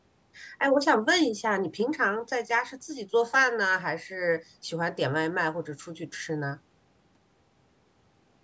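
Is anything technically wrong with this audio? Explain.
No, nothing in this speech recording points to a technical fault. It has passed through a call's microphone processing, so the lowest bass is trimmed away and nothing reaches above 8 kHz, which is how that path normally sounds.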